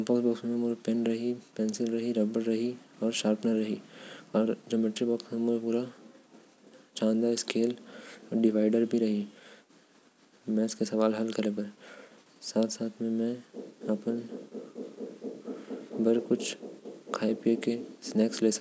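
A speech recording with no technical faults to point to. There is nothing here that needs a time or a cause.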